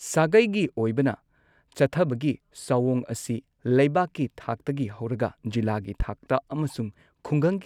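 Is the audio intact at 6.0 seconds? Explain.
No. A single loud pop at 6.0 to 6.04 s, likely a voltage pulse, jumps about 10 dB over the speech, which continues underneath without any dropout gap.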